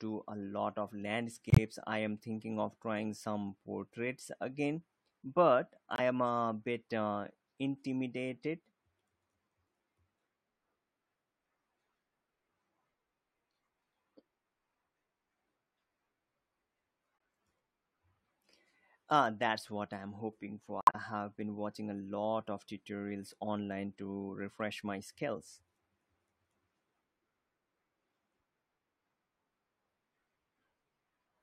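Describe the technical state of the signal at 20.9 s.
Corrupt frame muted, 20.81 to 20.95 s, after "what I'm hoping for": the decoder rejected damaged compressed frames and silence replaced them, leaving an abrupt 0.14 s hole, which fits six frames.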